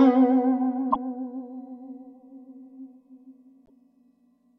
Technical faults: broken MP3 bit reservoir

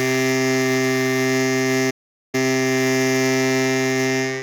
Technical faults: playback stall; time-compressed catch-up

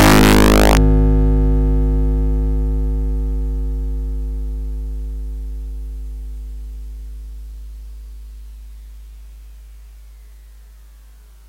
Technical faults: integer overflow

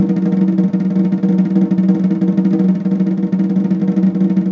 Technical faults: none

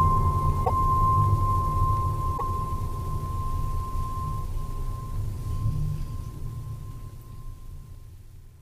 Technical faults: repeated frames

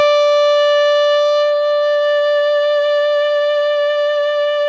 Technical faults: none

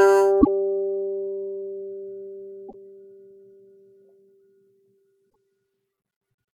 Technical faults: damaged data in a compressed stream

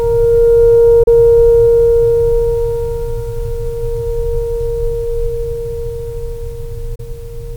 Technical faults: digital broadcast dropout

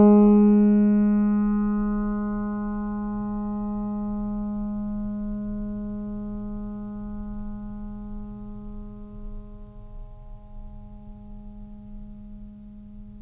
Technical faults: none

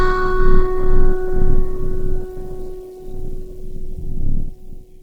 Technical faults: Opus compression

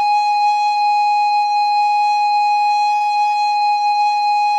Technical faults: short stall from a late packet

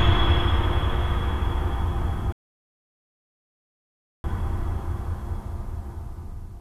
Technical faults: rebuffering stall

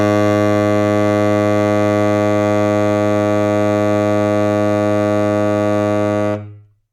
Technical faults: none

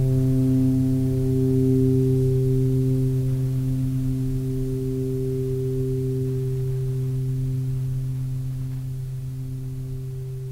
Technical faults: none

